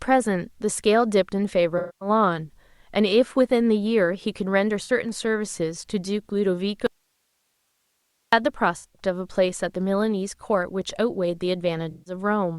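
AAC frame loss with concealment hits this speech recording at 1.78 to 2.09 s, 4.83 to 4.90 s, 8.77 to 9.02 s and 11.91 to 12.13 s. The decoder patches each missing stretch by reusing the last good spectrum, which turns the sound into a smeared, phasey, noise-tinged blur. The longest patch is about 235 ms, at the start. The 64 ms one is a brief blip. The 8.77 s loss is broken into scattered runs, the longest roughly a tenth of a second. The audio dropout to a faint residue runs from 6.87 to 8.33 s. The signal cuts out abruptly for nearly 1.5 s, and only hiss remains, about 50 dB below the normal level. This is likely a break upstream while the rest of the path stayed live and kept passing its own noise.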